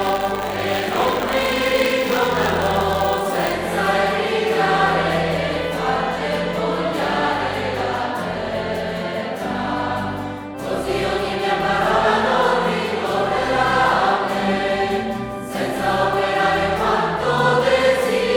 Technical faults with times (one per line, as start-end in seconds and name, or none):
0.00-3.53 buffer tearing